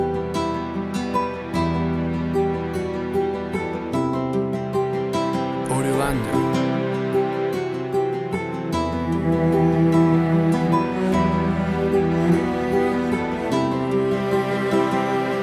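No audible technical faults anywhere in the clip.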